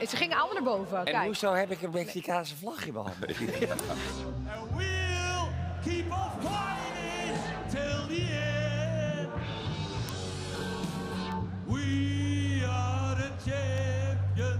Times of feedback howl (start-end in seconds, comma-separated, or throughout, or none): none